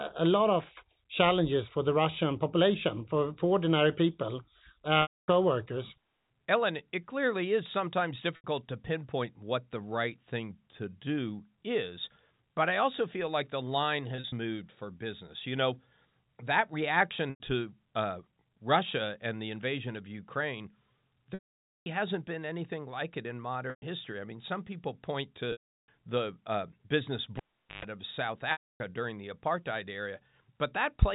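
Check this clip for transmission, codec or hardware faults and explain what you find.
Two faults stand out in this speech: repeated packet loss with pitch repetition, and one cable pulled and plugged in.

Packet loss with pitch repetition happens eight times, at 5.02 s (just after "for for ordinary people", 260 ms lost), 8.36 s (80 ms), 14.16 s (100 ms scattered over 160 ms, runs no longer than 40 ms), 17.3 s (100 ms), 21.34 s (520 ms), 23.7 s (between "anything like it in" and "I mean some people", 120 ms), 25.52 s (360 ms) and 28.52 s (280 ms). The loss counts fit 20 ms packets. The receiver fills each gap by looping the last pitch period and fading it out. The short gaps sound like a briefly held, buzzy tone. The long ones at 21.34 s and 25.52 s fade to silence before the voice cross-fades back in. That held tone is what sets this apart from a plain dropout, which would go straight to silence.

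The cable pulled and plugged in comes at 27.37–27.85 s, just after "the uh business". A pop marks the unplug, and the sound then drops to near silence for about 0.43 s. There is a 0.13 s burst of 50 Hz mains buzz while only the plug's tip is making contact, and a second pop as the sound returns. The two pops and the mains hum mark it as a physical connection fault. Packet concealment would give a repeated pitch instead.

The G.711 A-law telephone path at 64 kbps is heard in the bandwidth cut off above 4 kHz and at most a faint quantisation noise that follows the signal level.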